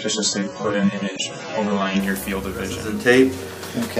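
From 0.0 to 2.0 s, an adaptive stream starting at a low bitrate: nothing above 8.1 kHz, stronger codec artefacts, then a gapless jump to AAC-LC 96 kbit/s, unlike a dropout.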